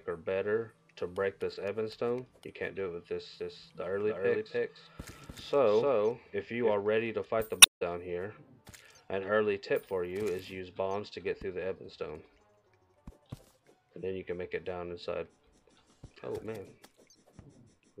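From 3.40 s to 6.74 s you get a doubled audio track: a second, full-band copy trailing roughly a third of a second behind, about as loud as the original, dry, and cutting in and out abruptly. Most likely the same feed got captured twice through a slower path.

Then at 7.59 s to 7.82 s there's damaged data in a compressed stream. Some of the encoded frames there were corrupted, so the decoder misread them and lost sync while hunting for the next valid frame header.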